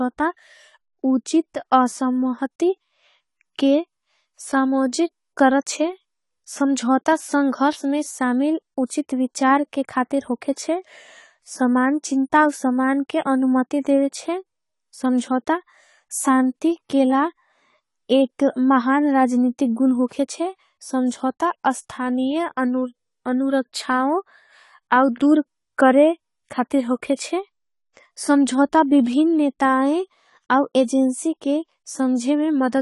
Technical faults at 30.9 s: AAC compression

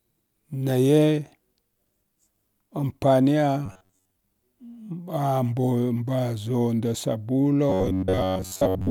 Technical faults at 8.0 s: robotic sound from repeated short buffers

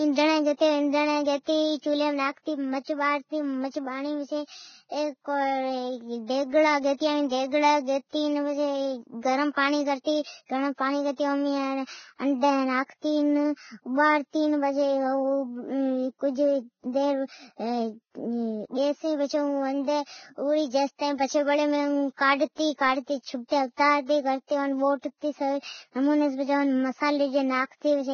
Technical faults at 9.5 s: Vorbis compression; pre-echo

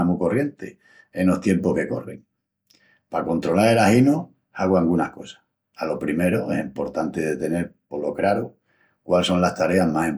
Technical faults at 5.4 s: none

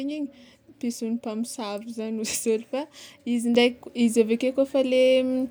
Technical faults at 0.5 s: none

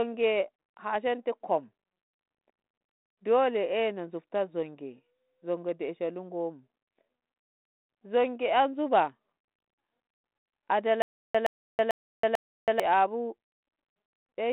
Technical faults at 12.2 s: stutter with silent gaps

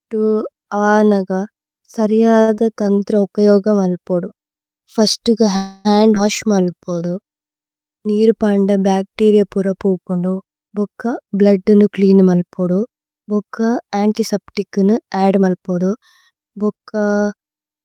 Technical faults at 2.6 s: short concealed packet loss

